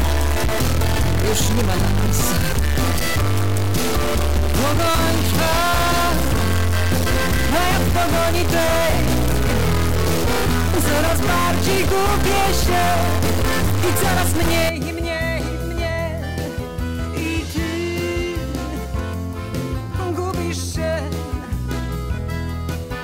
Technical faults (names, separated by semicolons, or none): stuck bit